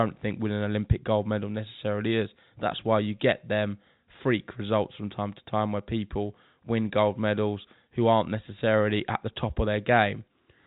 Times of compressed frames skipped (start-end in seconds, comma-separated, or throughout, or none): none